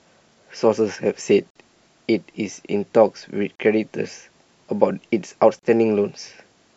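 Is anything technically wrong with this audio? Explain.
Yes. The speech breaks at regular intervals from gaps at the joins of encoded pieces: 1.50 to 1.56 s (about 51 ms), 3.56 to 3.59 s and 5.59 to 5.63 s (each about 38 ms), repeating every 2 s. The audio appears to have been encoded in 2-second segments and joined without trimming each segment's encoder start delay and last-frame padding. Each join produces a short silence with smeared edges, and the speech then resumes where it stopped.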